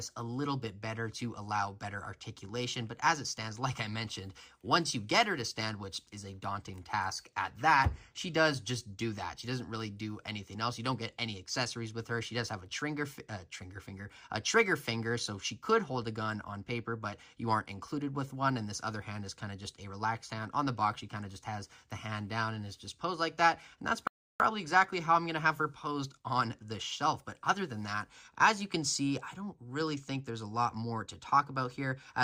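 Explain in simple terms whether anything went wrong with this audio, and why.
At 24.07 s there's a rebuffering stall: the player ran dry, went silent until 24.40 s, then picked up exactly where it stopped, adding about a third of a second.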